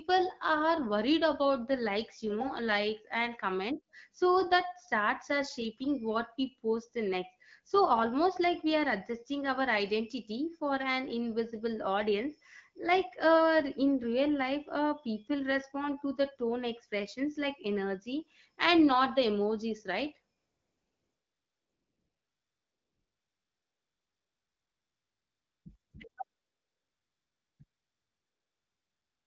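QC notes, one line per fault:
20.37–25.65 s, 25.75–25.93 s, 26.09–26.17 s, 26.23–27.59 s, 27.63 s to end: AMR comfort noise. After "not the emojis right", the phone treats the talker as silent and stops sending speech frames. The receiver substitutes synthetic noise built from a rough level and spectral-shape description, so the real background becomes a smooth, steady hiss that cuts in and out. On a spectrogram, these spans show flat, featureless noise with hard edges. The waveform shows a uniform low band where ambient detail should be.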